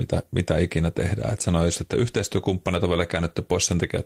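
Speech recording with no audible technical faults: level, timing and signal path all hold steady throughout.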